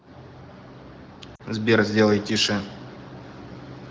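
From 1.35 to 1.42 s the speech fades toward near silence, from lost AMR speech frames: the wideband decoder repeats its last good settings with falling gain, a 40 ms gap that fits two lost frames.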